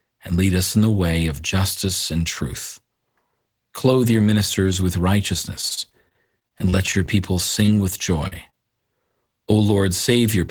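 From 5.61 to 7.10 s there is repeated packet loss, giving a robotic sound. More than a dozen short gaps fall across this stretch. None is longer than 26 ms. Each gap is patched by extending the last bit of sound, and the next gap follows quickly. Concealment covers 16% of the span. The speech turns choppy, with fragments missing.

Three bursts of short concealed packet loss follow: 7.66 to 7.70 s, 8.28 to 8.33 s, and 8.49 to 8.55 s. About 20, 40 and 20 ms of audio went missing. Each hole is filled by continuing the preceding sound, then blended back into the real signal. Each one sounds like a brief smear or wobble in the speech.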